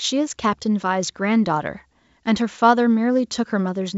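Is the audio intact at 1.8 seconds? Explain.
Yes, at 1.8 seconds the audio is intact, carried through G.722 wideband telephone coding at 64 kbit/s with nothing above about 7.7 kHz.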